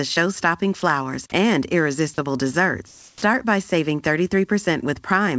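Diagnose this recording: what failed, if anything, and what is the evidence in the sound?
At 0.80 s, just before "and irresistible", 20 ms of flat noise replaces the sound. This is sound dropped by the voice detector in call processing, likely a missed speech trigger.

From 2.88 to 3.22 s, between "and irresistible" and "by saving", comfort noise replaces the background with steady, featureless noise about 8 dB quieter. The likely cause is discontinuous transmission, not a dropout.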